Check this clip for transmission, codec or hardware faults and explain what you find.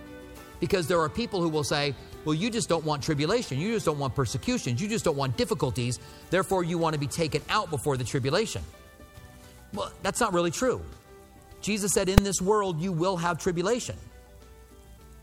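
One fault is present. At 12.18 s a single sharp bang cuts through the sound, lasting only about 2.9 ms, which fits a 128-sample block. This is invalid numbers at full scale: a calculation produced infinite or invalid values, which were forced to the largest positive or negative value, so the output sits flat at one extreme value, far beyond the audio's peaks, for that block. Because the block is so short, the start and end merge into one bang.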